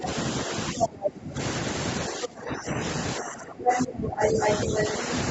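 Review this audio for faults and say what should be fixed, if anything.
The talker's speech dips and thins at 0.0 to 0.07 s, briefly, then sinks by about 20 dB at 0.46 to 1.39 s, 2.08 to 2.78 s and 3.16 to 5.03 s. This is speech suppressed in double talk, likely because the echo canceller could not separate near speech from loudspeaker echo and attenuated both.

A second voice leaks through at 1.03 to 1.1 s, 3.65 to 3.85 s and 4.21 to 4.89 s, roughly 5 to 10 dB louder than the talker. This is the other side's voice leaking through, likely residual loudspeaker echo the canceller failed to subtract.

To prevent both, use a headset or a better-tuned echo canceller with reliable double-talk detection.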